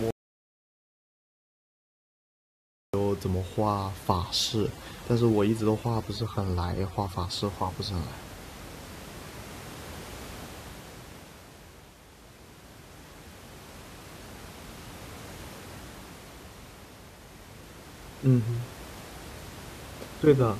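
From 0.11 s to 2.94 s the speech drops out to silence, a gap of about 2.83 s with no room tone at all. This audio dropout to silence likely comes from the input being lost while the recorder kept writing silence, so that stretch is gone.

Between 4.12 s and 7.42 s there is overdone noise removal. The room noise, which sits about 18 dB below the speech, is pulled down and breaks up into twinkling specks, and the quieter parts of the voice are cut away with it.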